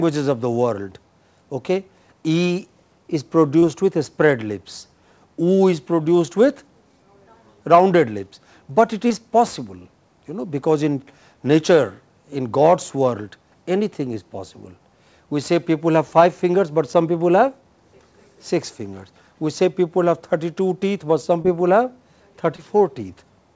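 Short concealed packet loss occurs four times, at 3.60 to 3.64 s, 9.08 to 9.12 s, 21.42 to 21.46 s and 22.56 to 22.60 s. Each time about 20 ms of audio arrived too late for the decoder, so the receiver bridged the gap by carrying the preceding sound forward before blending back, which is heard as a brief smear or wobble. The call path, whose coding points to G.722, carries nothing above 8 kHz.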